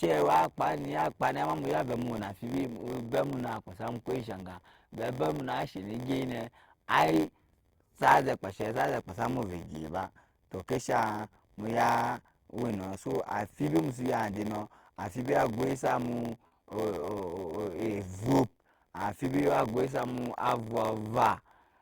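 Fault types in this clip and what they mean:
Block size mismatch (padded): One stage writes shorter blocks than the next reads, and zeros fill each remainder. A tiny gap recurs throughout, giving an 86.1 Hz buzz that fits a 512-sample read block. The speech runs at 0.938 speed, slower but near normal pitch.
Short concealed packet loss: At 16.47 to 16.53 s, just after "agwai samu", about 40 ms of audio failed to arrive in time. The receiver filled the hole by extending the preceding sound, then blended back. It is heard as a brief smear.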